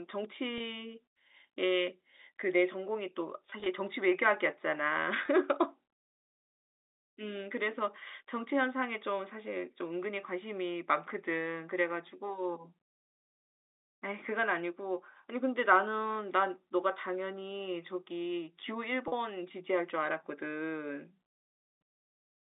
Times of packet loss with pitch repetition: 0.58-0.60, 3.50-3.66, 5.26-5.28, 19.08-19.12

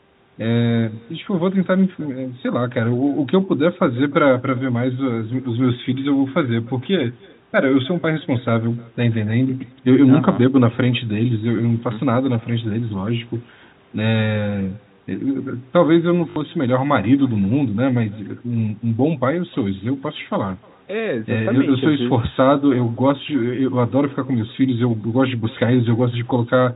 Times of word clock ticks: none

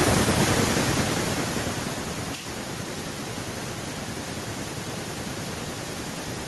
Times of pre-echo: none

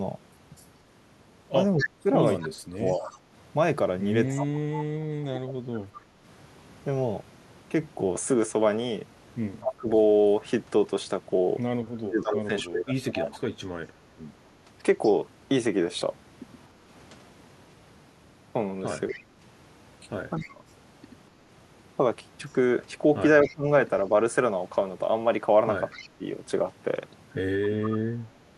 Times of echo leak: 0.56-4.46, 9.61-15.11, 19.08-27.98

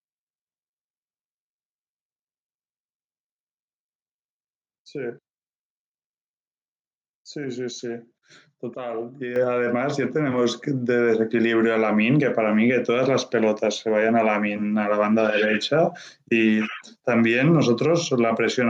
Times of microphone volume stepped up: 9.36

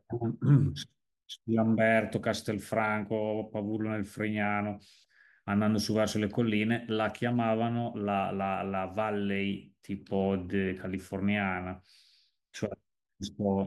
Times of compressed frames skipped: none

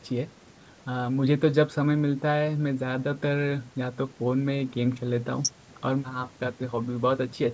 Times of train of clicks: none

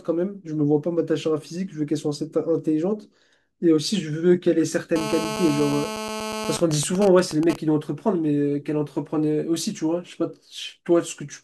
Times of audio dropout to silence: none

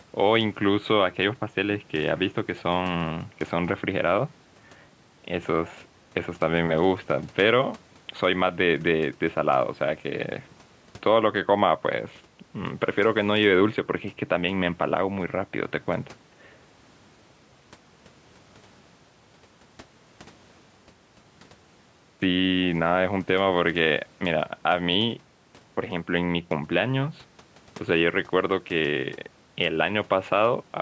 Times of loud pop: none

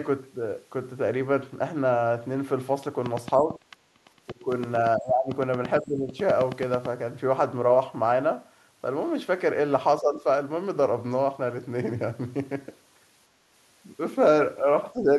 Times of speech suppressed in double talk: 3.37-4.47, 4.97-5.30, 5.81-6.16, 10.01-10.26, 14.93-15.10

